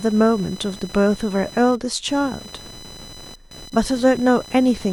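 Right through the speech there's computer activity noise, a buzzy chirp pulsing around 1 kHz, roughly 20 dB down, from the computer's load changes shaking the shared ground.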